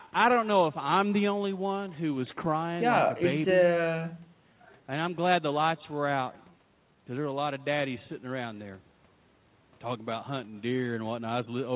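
Right from the start there's echo with no canceller. The far end is clearly playing the call out of a loudspeaker, the mic is catching it, and nothing is scrubbing it out, so the speech comes back after roughly a fifth of a second of network round trip. It's faint, about 28 dB down, but you can hear it as a thin shadow trailing each phrase. That shadow is dulled further by the line itself, which stops at 4 kHz, consistent with a narrowband G.711-style call.

Underneath that, and also running the whole way through, is clock drift between sender and receiver. Here the sender's clock is slow, somewhere around 4 percent behind the receiver's. The jitter buffer on the receiving end keeps running low, so it has to keep stretching things out to avoid going empty. The result is a faintly uneven feel to the timing across the clip rather than any single obvious glitch.

That stretching shows up as repeated timing corrections from 0.34 s right to the end at 11.75 s. 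The receiver keeps repeating little slivers of audio, all in the same direction but at irregular spacing, which plays the sound back at about 96 percent speed. Over the stretch that adds something like 400 ms. Each edit is tiny, so it comes across as small hiccups and a slightly lagging, unsteady tempo rather than clear dropouts.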